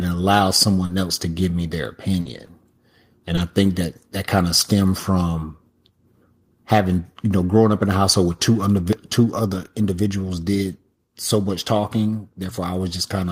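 Between 0.85 and 3.39 s, just before "I think that that", there are scattered short gaps: roughly four small holes, none longer than about 40 ms, covering only around a twentieth of that stretch. Each packet was lost or arrived late, and the receiver filled the hole by stretching the sound that came before it. The result is a brief tick, smear or hiccup while the speech stays clear. These are separate, isolated blips, not a continuous patch of degraded sound.

At 9.39 s the level drops suddenly by about 3 dB, both speech and background together, and stays lower. The likely cause is the call software turning down the microphone's input volume in a single step after judging it too hot. Because the change is an instant step rather than a gradual fade, it points to a gain setting being switched, not to the talker moving away from the microphone.

Three runs of lost packets were rebuilt from error correction, at 9.53–9.67 s, at 10.67–10.73 s just before "so much", and at 12.45–12.51 s. 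The first span fits about four lost packets and the others about two each. The packet that followed each loss carried a low-bitrate copy of it, and the decoder played that copy. Nothing is silent or smeared here, unlike the earlier gaps. Instead the speech turns briefly rougher and grainier, then returns to normal.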